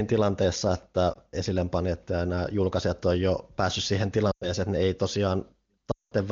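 Speech, carried over AMR wideband (HD Voice) at what sounds like a high rate, with three bursts of lost AMR speech frames. At 1.13 s, between "tilanteessa että" and "panijat ja nämä julkaisijat", a brief warble fits one lost 20 ms frame. From 4.31 to 4.53 s, after "on jo päässyt siihen" and before "että ne ei", about 100 ms is lost. From 5.91 to 6.13 s, about 200 ms is lost. In the two longer gaps the decoder repeats the last good pitch and vocal tract settings at falling gain, so the sound drops to near silence within two frames before returning weak or rough. On a spectrogram these show as smeared, frozen harmonics fading toward silence. On the waveform they appear as a decaying envelope dip.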